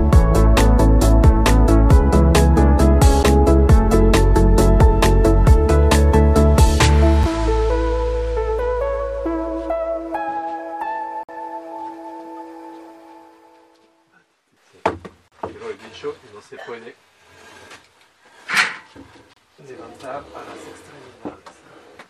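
Gaps between stream segments: timestamps of consecutive 4-second segments don't meet, so the player fills each hole with silence. Hard-edged dropouts, 6 to 53 ms long, break the sound at 3.23 s, 7.23 s, 11.23 to 11.29 s, 15.28 to 15.32 s and 19.34 to 19.37 s.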